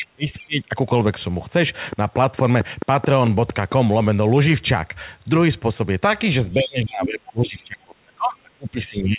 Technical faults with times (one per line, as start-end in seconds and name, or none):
0.00-0.70 speech suppressed in double talk
0.40-0.45 other side's voice leaking through
1.93-3.73 train of clicks
6.52-7.06 other side's voice leaking through
6.54-9.19 speech suppressed in double talk
7.47-7.56 other side's voice leaking through
8.94-9.01 other side's voice leaking through